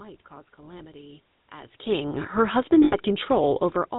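GSM full-rate codec damage runs throughout: the speech is rebuilt from a vocal-tract model driven by sparse regular pulses, giving a plainly buzzy, gravelly roughness and nothing above 4 kHz, which fits the 13 kbps full-rate coder. Lost GSM frames come at 0.78 to 0.82 s and again at 2.84 to 2.95 s. Each time, the last good frame is repeated, so the sound hangs briefly as a rough metallic ring. The longer second gap fits about four 20 ms frames.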